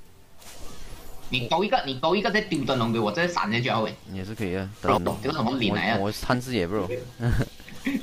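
From 4.88 to 5.08 s the sound is briefly scrambled by frames out of order. Two adjacent blocks, each about 96 ms long, were decoded in swapped order, which fits runs of three frames apiece. The later block plays first, then the earlier one. The result is a quick garbled flutter. No time is lost.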